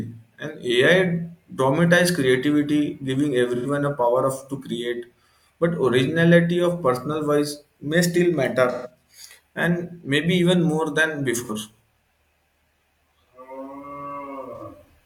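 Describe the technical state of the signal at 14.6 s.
At 14.6 s the signal has an AAC frame loss with concealment. It runs from 14.56 to 14.62 s, with about 43 ms of audio lost, which fits a single lost frame. The decoder had no data for that stretch. It rebuilt it from the last good spectrum, guessing phase and energy rather than decoding them. The gap is too short to fade out. It is heard as a brief smeared, noisy or phasey patch in the speech.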